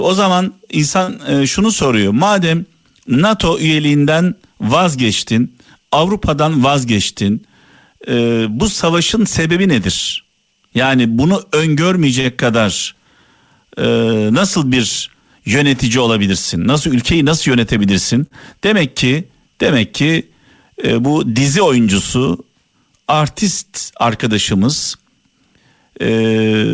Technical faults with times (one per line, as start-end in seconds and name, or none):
1.04-1.09 short stall from a late packet
6.44-6.68 jitter buffer speed-up
12.20-12.26 short stall from a late packet
17.26-17.86 jitter buffer speed-up
18.26-18.33 short stall from a late packet